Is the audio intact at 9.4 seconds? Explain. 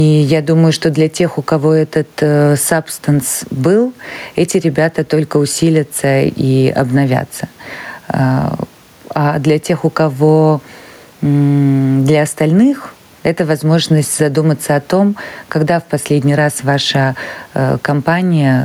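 No. Gain pumping runs through the whole clip, so at 9.4 seconds the level is still riding up and down. The likely cause is input gain set far too high, with a fast limiter clamping down on each loud syllable, swinging the level by roughly 10 dB. The room noise sits about 41 dB below the speech, and loud and soft parts end up closer in level, leaving the sound squashed and breathing.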